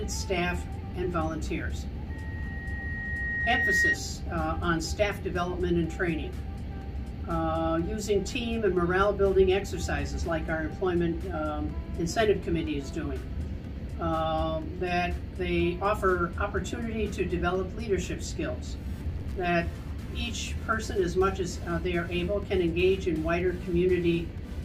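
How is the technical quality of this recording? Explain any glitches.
The recording is marred by one clear fault. From 2.10 to 3.98 s there is loudspeaker feedback squeal: the microphone is picking up its own loudspeaker, and the loop gain tops unity at 1.9 kHz. A pure tone swells over roughly a second and a half until it sits a few decibels above the sound. That growth marks it as feedback rather than a steady interference whistle.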